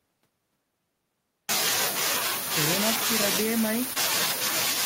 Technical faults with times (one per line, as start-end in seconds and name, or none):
0.00-4.86 echo with no canceller
3.93-3.97 short concealed packet loss